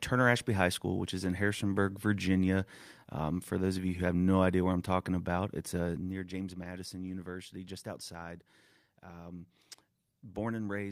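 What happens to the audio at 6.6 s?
At 6.63 to 6.65 s there is a lost packet rebuilt from error correction: the next packet carried a low-bitrate copy, so the decoder fills the roughly 20 ms with a grainier, noisier stretch of speech rather than a gap. The waveform stays continuous, while the spectrogram shows a brief smeared, noisy slice.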